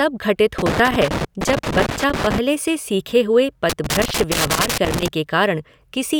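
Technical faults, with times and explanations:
0.58–2.38 s and 3.69–5.08 s, loose connector crackle: irregular bursts of crackle and scratching break up the speech. A worn or dirty contact is making and breaking as it moves. This chops the signal on and off, and any DC on the line adds sharp pops.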